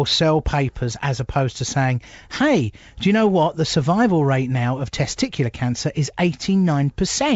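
No faults heard: the speech runs over a G.722 wideband telephone path at 64 kbit/s, which passes audio up to about 7 kHz.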